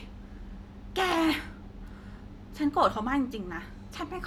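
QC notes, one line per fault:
1.12 s, repeated buffer: a single block of about 5.8 ms, which fits a 256-sample buffer, plays twice because fresh audio arrived late, so the speech briefly stalls and a few milliseconds of real signal are skipped. At this size the repeat sounds like a small click rather than a stutter. The waveform shows an identical short segment copied back to back with a hard discontinuity at the join, and the spectrogram shows a thin vertical broadband line there.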